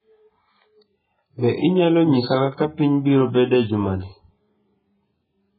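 A short speech recording carries heavy codec damage from start to finish, most likely AAC compression at a very low rate, consistent with AAC-LC at around 8 kbps. Nothing remains above 4.5 kHz, so the voice sounds dull and muffled, with a smeared, warbling texture where the coarse quantisation has left gaps. On a spectrogram the energy stops at a hard ceiling near 4.5 kHz, and the region beneath it is patchy and blotchy. From 0.0 to 3.5 s a thin, steady feedback whistle at 5 kHz sits well below the speech, swelling and fading slowly in level. It is likely caused by a loudspeaker-to-microphone loop held just short of runaway. A spectrogram shows it as one thin horizontal line that ends at 3.5 s. It is too quiet to change the waveform's outline.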